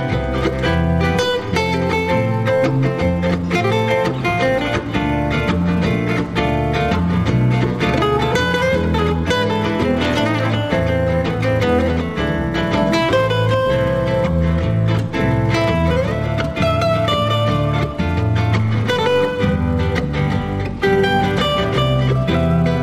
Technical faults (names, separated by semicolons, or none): none